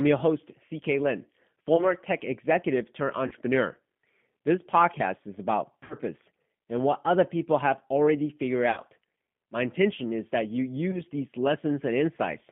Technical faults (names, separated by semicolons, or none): G.729 codec; VoIP packet loss concealed by the speech codec